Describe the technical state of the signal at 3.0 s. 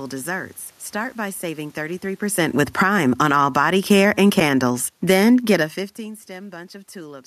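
Automatic gain falling, 2.24 to 3.57 s, after "by saving": the gain control judged the input too loud or its background noise too strong and lowered it about 10 dB, so speech and room noise sink together.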